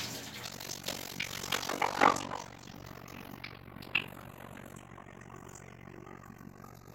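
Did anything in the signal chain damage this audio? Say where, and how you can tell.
Yes. The channels drifting apart fault comes from the converter stage. The two channels run on separate clocks about 30 ppm apart, so the inter-channel delay creeps up to roughly 0.15 ms by the end. Summed to mono, this gives a slow flanging sweep across the whole clip. On a spectrogram the comb notches glide gradually in frequency.

The overlap-add ripple fault belongs to a processing stage that reassembles windowed frames. From 0.45 s to the end, the level pumps at roughly 50 Hz, once per frame. The frame overlap doesn't sum to constant gain, so the level is modulated every frame. The ripple is about 60 dB deep, nearly gating the sound each frame. The waveform envelope shows regular periodic dips, and the spectrogram shows evenly spaced vertical striping.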